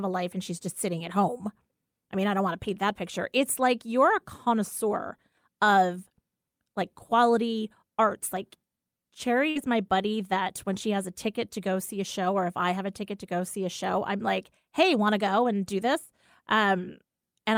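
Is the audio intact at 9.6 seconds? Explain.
No. A burst of packet loss runs from about 9.49 to 9.58 s. The receiver fills about 57 ms by extending the last sound and fading it, which gives a held buzz or dying hiss. Sound then resumes just before 9.6 s, with about 60 ms skipped.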